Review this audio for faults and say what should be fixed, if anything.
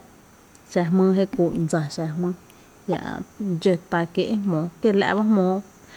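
At 2.92 to 2.95 s the speech is interrupted by a short chirp-like burst, the sound of a corrupt frame decoded. Flipped bits in the compressed data gave the decoder wrong gains or misread codes, and it played the damage anyway, putting energy at frequencies unrelated to the signal. The error spans roughly a couple of frames and peaks near -15 dBFS. Add checksums on each frame and conceal or drop frames that fail, rather than decoding them.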